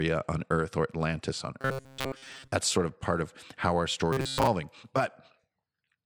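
Audio likely arrived too seldom from 1.61 to 2.52 s and again from 4.13 to 4.47 s. Most of those stretches were filled by looping a roughly 7.5 ms buffer. The result is robotic sound from repeated short buffers, a rigid 134 Hz metallic buzz over the speech.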